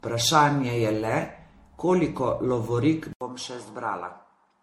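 From the very start the speech has a swirly, smeared, hollow quality with soft attacks, more than a 64 kbit/s MP3 alone would give, and nothing above 16.5 kHz. That points to generation loss, likely from encoding about seven times over, each pass adding fresh quantisation damage.

At 3.13 s there's an 80 ms gap. After it, the sound runs to the end duller and boxier, topping out at 11.4 kHz, about 5 dB quieter, with a faint new noise floor around 55 dB down. That's likely the input switched to a poorer device.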